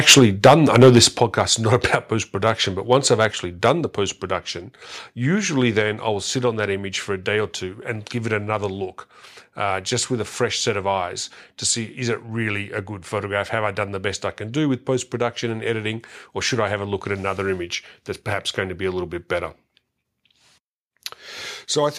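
From 0.08 to 1.41 s the speech shows microphone overload. The input is likely set too high, driving peaks about 10 dB past the converter's limit and flattening roughly 3% of samples, so the loudest syllables carry a harsh, crackling edge. Within that stretch the microphone volume is stepped down twice: about 3 dB at 0.19 s, then about 8 dB at 1.2 s, just before "is not". Each is a sudden, single-step drop in voice and background level, most likely the call software reacting to the clipping. Shorter overloads, each about 2 dB over, follow at 1.74 to 1.95, 2.46 to 2.50, 3.21 to 3.25 and 3.65 to 3.70 s, the last just before "the post production usually". These give brief crackly tops. Further step-downs of about 3 dB at 3.81 s and about 2 dB at 5.82 s lower the level again.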